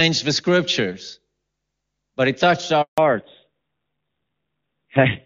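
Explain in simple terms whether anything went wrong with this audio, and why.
A handover gap hits at 2.82 to 2.98 s, just after "but it touched": the phone switched networks and, for about 160 ms, no speech arrived, so it goes silent.

A fallback to narrowband follows from 2.98 s to the end: the call left clear HD Voice for an older codec, cutting everything above 4 kHz, so speech sounds duller and rougher.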